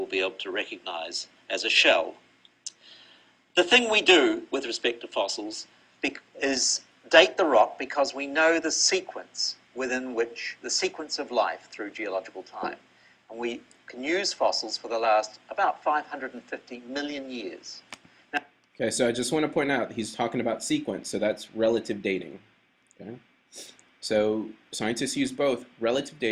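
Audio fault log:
No technical faults can be heard anywhere in the audio.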